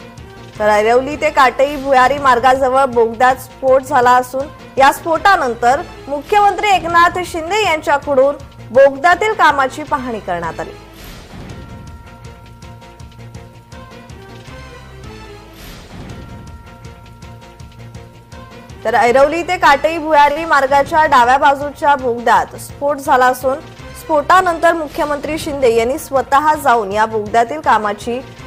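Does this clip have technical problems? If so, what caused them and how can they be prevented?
Yes. Short stall from a late packet, 20.31 to 20.38 s: a packet arrived late, the jitter buffer emptied, and the last sound was stretched for 45 ms with nothing lost. A steadier network path or a slightly deeper jitter buffer would prevent it.

Jitter buffer speed-up, 22.34 to 23.26 s: the buffer held extra audio, so tiny pitch-period slices, around 50 ms in total, were cut, playing the sound about 5 percent faster. Smoother packet delivery would prevent it.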